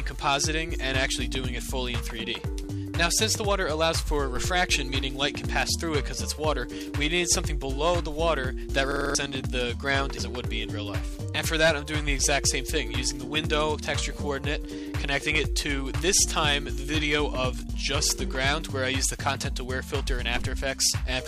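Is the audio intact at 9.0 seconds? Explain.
No. From 8.92 to 9.15 s there is a system hang loop: the system froze while the audio hardware kept replaying the same stretch of its ring buffer. One 46.44 ms piece, which fits a 2048-sample buffer, repeats five times at 21.5 Hz, giving a rapid mechanical stutter, and about 200 ms of real audio is lost. The waveform shows identical copies tiled end to end. The spectrogram shows the same slice repeated, with vertical seams every 46 ms.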